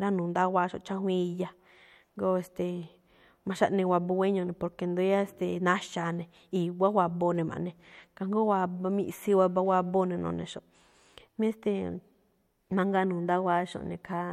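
No technical faults can be heard at any point in this speech recording. There is nothing here that calls for a timestamp or a fault description.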